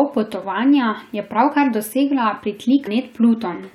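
Speech clip, and there's one glitch worth flagging: a short disturbance at about 2.86 s, lasting under 20 ms. That's damaged data in a compressed stream. A chunk of the encoded bytes there got corrupted, so the decoder chokes on that frame, loses sync, and has to hunt for the next valid frame header before it can pick up again. You hear that scramble as the brief glitch.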